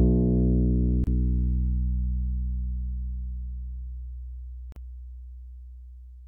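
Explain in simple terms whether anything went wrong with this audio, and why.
A gap at a join of encoded pieces appears twice, at 1.04 to 1.07 s (30 ms) and 4.72 to 4.76 s (39 ms). The audio was compressed in separate chunks and stuck together untrimmed. The encoder's leftover silence opens brief, softened holes before the sound resumes.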